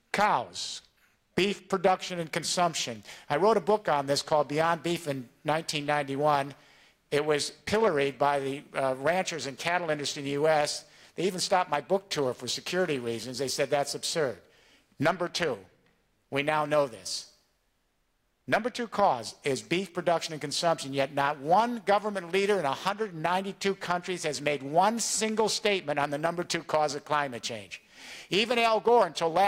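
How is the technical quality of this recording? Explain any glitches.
No glitches are audible anywhere in the recording, so there is nothing to explain.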